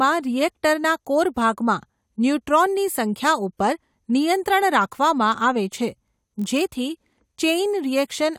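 A block size mismatch (padded) runs from 5.86 s to 6.67 s. One stage hands over blocks slightly shorter than the next stage reads, so each block ends in a short run of zeros. Those regular gaps put a buzz at 46.9 Hz under the speech, which fits a 1024-sample read block at 48 kHz. The slowdown is tiny, 0.999 times normal speed, with the pitch essentially unchanged.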